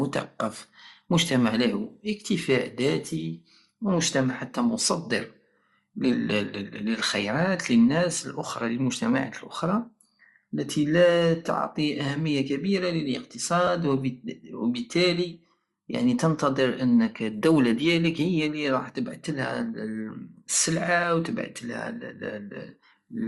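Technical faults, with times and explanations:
Throughout: Bluetooth LC3 compression, likely the cause of the plainly audible coding damage across the speech. The upper spectrum sounds thinned and partly replaced with noise, giving sibilants and breathy consonants a grainy, hissy edge rather than clean detail. This happens when a transform codec cannot afford to code every high-frequency band and fills the gaps with shaped noise. The character fits a bitrate around 48 kbps with short 7.5 ms frames.
13.67 s: lost LE Audio frames. A brief blip, about 7.5 ms long, interrupts the speech with a rough, noisy patch instead of clean signal. The gap fits a single lost frame. The decoder conceals it by repeating the previous frame's spectrum with randomised signs, which keeps the level and tone colour roughly right but scrambles the phase, so the moment sounds smeared rather than dropping to silence.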